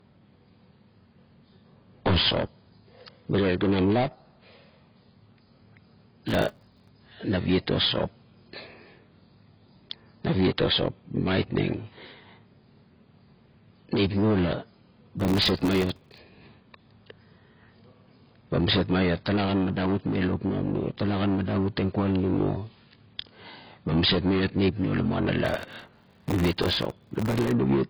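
Throughout, the speech sounds dull and smeared, with nothing above 5.1 kHz. This is likely low-bitrate audio saved at a high bitrate: the sound points to a very low-rate AAC encode later re-encoded as high-rate MP3, which kept the earlier cut-off and artefacts.

Processor overload crackle appears from 6.28 to 6.88 s, ending just before "naviet o sop", again from 15.20 to 16.18 s, and longest from 25.45 to 27.51 s. It is a gritty, tearing crackle over the speech. Tiny audio buffers, which fits blocks of well under a millisecond, repeatedly missed their deadlines and were replaced by hard-edged slivers of silence. The longer bursts point to roughly 100 and 300 such dropouts.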